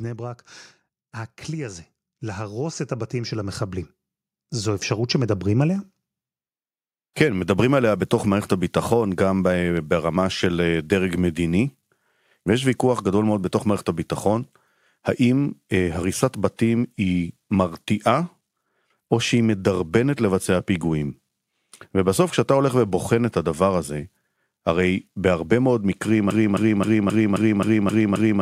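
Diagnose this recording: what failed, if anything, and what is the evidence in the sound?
Call processing: automatic gain rising from 1.48 to 5.54 s lifts speech and background together by about 12 dB. The waveform envelope and the spectrogram noise floor climb steadily.

Playback stage: a broken-record loop from 26.3 s to the end repeats one 0.26 s fragment eight times, likely a stalled stream resending its last buffer. The waveform shows identical repeating blocks.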